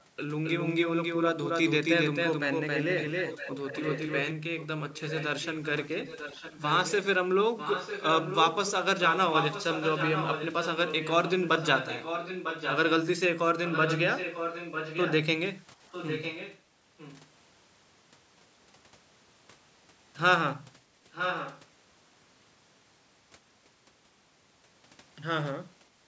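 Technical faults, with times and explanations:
0.44 to 4.30 s, doubled audio track: a second, equally loud copy of the speech runs roughly 300 ms behind the first, full-band and dry, with no decay or room colour, and it appears and vanishes abruptly at its edges. The flat, clean lag points to the same signal being mixed in twice, most likely captured again through a slower path or left as two out-of-step copies by an edit.
2.97 to 4.13, 4.59 to 6.94, 7.57 to 12.77, 13.65 to 15.15, 15.92 to 16.60, 16.98 to 17.27 and 21.12 to 21.62 s, echo leak: a delayed repeat of the speech trails it by 949 ms, roughly 5 to 20 dB below the direct sound, in stretches of varying length. The long, fixed delay suggests the far side playing the call on a loudspeaker, where its echo canceller likely failed to remove what its microphone picked up, sending that residue back down the line.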